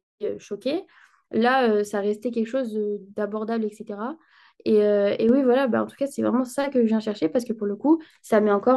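Speech that steps up abruptly at 5.29 s and stays louder through to the end, with the voice and the background noise rising together by about 4 dB in a single instant rather than swelling gradually. That is a sudden gain jump. The likely cause is a digital gain change applied from one sample to the next without any ramp, such as a level setting or bit shift switched in mid-stream, which lifts everything in the signal at once.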